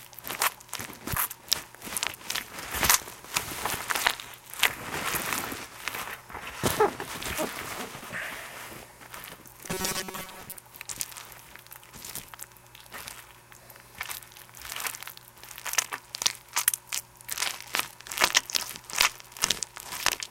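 Robotic sound from repeated short buffers runs from 9.68 to 10.55 s, likely because audio arrived too seldom and short pieces about 5.3 ms long were replayed over most of that stretch. This imposes a rigid, metallic buzz at 188 Hz that only loosely follows the sound.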